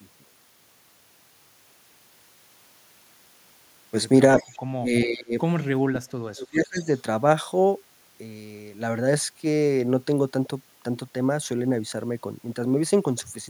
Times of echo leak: 4.38-4.57, 5.59-5.64

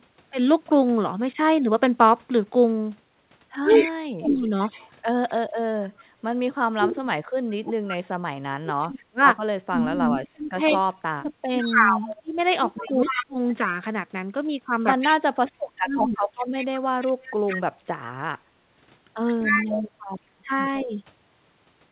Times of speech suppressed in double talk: 3.65-4.51, 6.74-13.39, 15.09-20.93

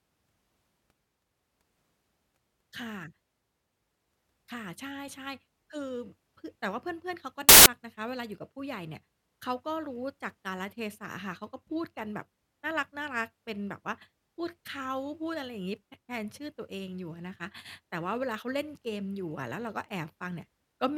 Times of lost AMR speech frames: none

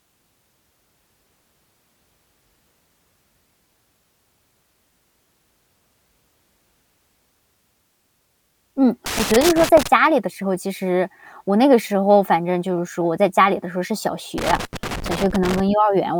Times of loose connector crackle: 9.06-9.87, 14.38-15.60

